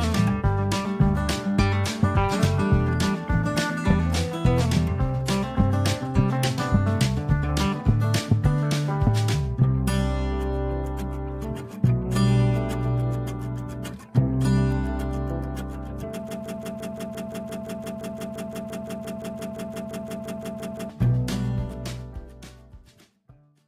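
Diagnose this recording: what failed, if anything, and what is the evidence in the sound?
A stalled playback or streaming buffer is the likely cause: the stage kept resending the last fragment it held. From 16.29 s to 20.9 s a 0.17 s slice repeats exactly, back to back, about 27 times, in a broken-record loop, and the audio due in that span is lost.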